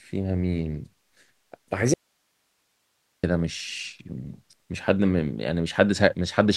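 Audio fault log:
1.94 to 3.23 s, audio dropout to a faint residue: the speech cuts off abruptly and stays gone for about 1.3 s, then snaps back in mid-flow rather than easing in like a natural pause. What fills the gap is just hiss, sitting roughly 50 dB below the speech. So the path after the break stayed live while the wanted signal was lost upstream, likely a brief interruption at the source or link feeding this chain.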